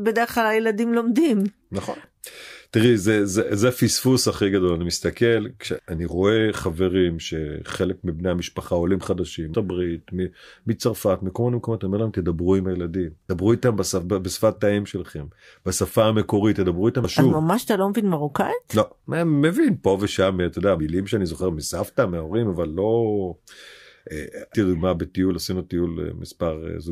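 Audio missing between chunks at 2.04, 5.79, 9.54, 13.29, 17.04, 20.79 and 24.54 s. Every 3.75 s the speech abruptly skips ahead, dropping roughly a third of a second, with no gap left behind. This is likely a recorder working in 4-second chunks and losing audio at each handover.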